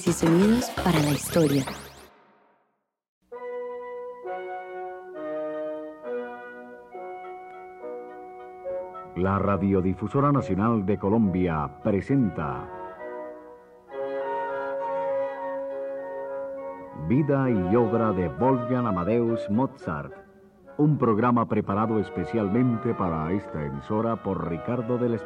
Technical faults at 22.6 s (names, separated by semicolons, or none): drift correction step